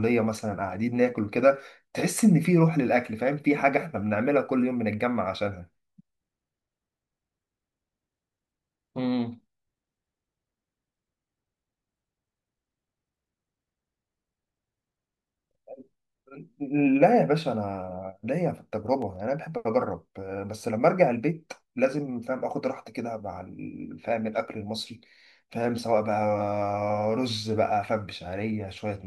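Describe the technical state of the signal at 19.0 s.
Right at 19.0 s you're in a short burst of CD scratch ticks, running from about 18.75 to 19.16 s: four sub-millisecond clicks in the speech. Each comes from a blemish wiping out more data than error correction can rebuild, so the player patches or mutes those samples.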